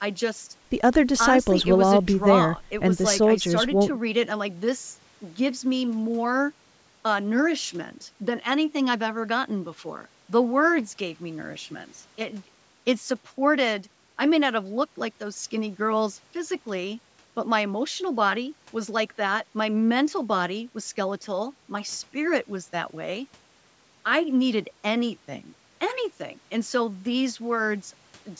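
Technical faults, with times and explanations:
Nothing stood out on listening to this speech, which has passed through a call's microphone processing with no content above 8 kHz and the lowest bass filtered out as expected.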